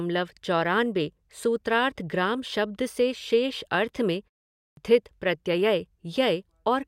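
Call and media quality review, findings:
Clipped start after a pause at 4.58 s, right after "अर्थ में": output device dozes through the 0.37 s gap, wakes late, swallows about 190 ms of the next onset.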